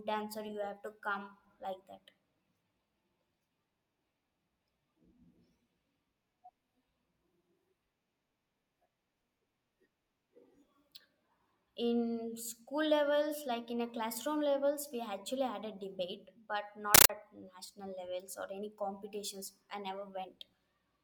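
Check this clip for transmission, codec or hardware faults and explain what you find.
One fault is present. From 16.95 to 17.10 s, a compressed stream is played as audio. Undecoded AC-3 data, fitting a 640 kbps stream, is treated as samples. Bursts of noise lasting 13.3 ms, then zero padding, repeat 31.25 times a second. The speech gives way to loud, chattering static.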